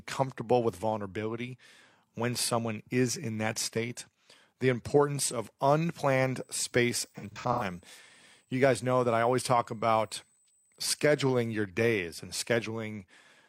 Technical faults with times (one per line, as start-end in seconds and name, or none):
6.40-11.57 USB whine
7.15-7.63 AAC frame loss with concealment